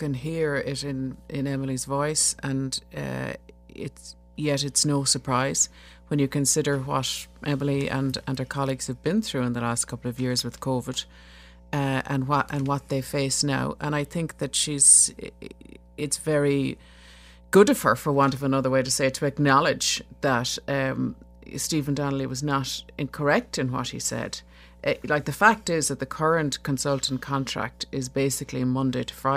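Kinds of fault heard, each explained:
Mains hum: A steady 60 Hz tone with low harmonics runs under the speech for the whole clip, sitting roughly 25 dB below it. It comes from the power line leaking into the signal path through a ground loop or a nearby transformer.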